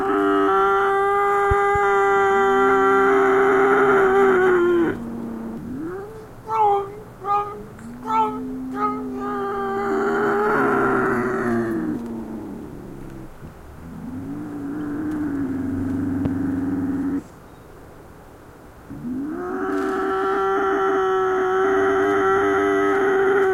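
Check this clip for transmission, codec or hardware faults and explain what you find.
There are loud pops here, a pair from 1.51 to 1.78 s and a single one at 16.25 to 16.28 s. Each jumps about 10 dB above the sound, which carries on underneath. It's likely a voltage spike from a plug, switch or static, shaped by the downstream circuitry into a sharp thump.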